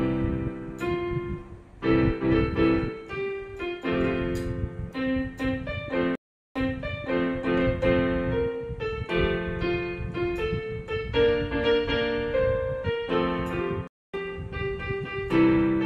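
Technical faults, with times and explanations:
6.15 to 7.31 s, stream reconnect: the connection drops, there's about 0.4 s of silence, then a fresh decoder picks up 0.76 s earlier than where it cut out, so you hear that stretch again. That jump back fits the server resending a burst after the player reconnects.
13.87 to 14.15 s, stream reconnect: same kind of drop, with 0.26 s of silence, but this time it resumes a little later, about 0.15 s on, so a short piece is skipped instead of repeated.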